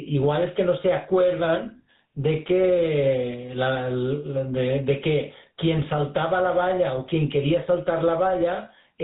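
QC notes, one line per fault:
Throughout, gain pumping: gain swings by about 10 dB under loud syllables, squashing dynamics, likely an over-hot input hitting a fast limiter.
Throughout, GSM full-rate codec: buzzy, gravelly roughness and nothing above 4 kHz, from pulse-excited vocal-tract coding, consistent with roughly 13 kbps.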